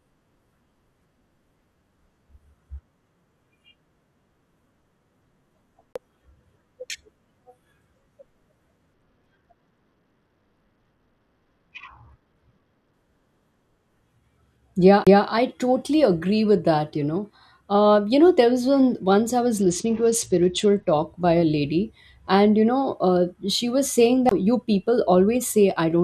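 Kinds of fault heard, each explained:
CD skip: the laser jumps tracks, so the speech mutes for about 20–30 ms and resumes elsewhere, at 5.93 s, 15.04 s before "I totally agree with", and 24.29 s after "she was saying".
Bluetooth SBC bit pool drop: the link drops the bit pool from 28 to 10, about 84 kbps, so treble dulls and grit creeps in, 8.94–12.93 s and 19.61–20.90 s.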